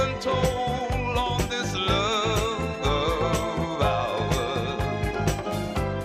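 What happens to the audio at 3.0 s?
Nothing goes wrong at 3.0 s; the audio plays through that moment intact, with no dropout, click or distortion.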